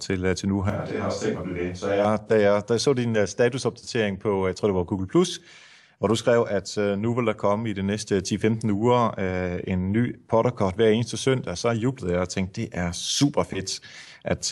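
From 0.70 to 2.05 s the voice turns suddenly roomy and hollow, loses its low end, drops roughly 5 dB in level, and sits over more audible background noise, some 35 dB below the speech. It returns just as abruptly to the close, full sound. This is a switch to a distant microphone. The close microphone's feed likely dropped out, and a mic further away filled in, picking up more of the room.

Inside that stretch, from 1.37 to 1.40 s, the sound jumps forward. The same thing happens again from 3.14 to 3.17 s. Both are compressed frames skipped. Each time a single frame of 46.4 ms was never played, most likely because it was missing or rejected as damaged, so about 50 ms of audio vanishes.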